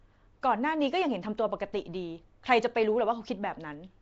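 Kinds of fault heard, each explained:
Nellymoser compression: speech carries a rough, hissy halo and smeared underwater quality with nothing above 7.8 kHz, likely from Flash's Asao codec starving weak bands and filling them with noise.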